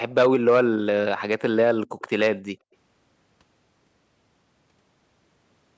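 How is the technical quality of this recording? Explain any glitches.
Two kinds of glitch affect the speech: brief echo leak and one dip from background gated by the echo canceller, both typical of a speakerphone call path. The call microphone processing's band limit, with nothing above 8 kHz, is expected.

Echo leak appears at 0.10–0.14 s and 1.99–2.10 s as a very faint, roughly 35 dB down, copy of the voice trailing by 163 ms. It is likely a loudspeaker echo the far end's canceller failed to fully subtract, so residue was returned as short scraps.

Background gated by the echo canceller occurs at 2.42–2.65 s. The room tone drops by about 40 dB at its deepest for roughly a fifth of a second, then returns. The canceller clamped the microphone while the loudspeaker was active, briefly leaving near-silence.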